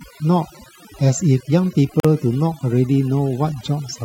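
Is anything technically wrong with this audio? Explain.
Yes, there are two faults.

Throughout, the background drops to near silence scattered with twinkling specks. This is overdone noise removal: the reduction was set too hard, switching off frequency bands close to its noise estimate and taking softer parts of the voice with them.

From 2.0 to 2.05 s, a sudden hole of about 45 ms opens in the sound, with smeared edges, and the speech then resumes where it stopped. This is a gap at a join of encoded pieces, where encoder start-up silence and end-of-frame padding were left untrimmed.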